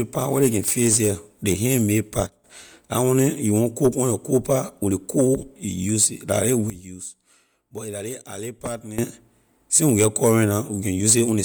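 Throughout the speech there is a breathy, grainy edge on the upper frequencies, even though the band still reaches about 20.1 kHz. The likely cause is Bluetooth LC3 compression. The transform codec discards fine detail in parts of the upper spectrum and fills those gaps with synthetic noise. The damage is plainly audible and consistent with roughly 48 kbps in 10 ms frames.

At 2.27 s the level suddenly drops by about 12 dB, with the background noise falling along with the speech, and at 2.44 s it snaps back up. A larger drop of about 14 dB hits at 6.70 s and lasts until 8.98 s, when the level abruptly returns. These are sudden gain jumps, likely from digital gain being changed between one sample and the next with no ramp, so each edge is a hard step in loudness.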